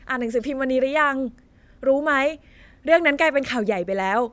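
No technical faults occur at any point in the recording.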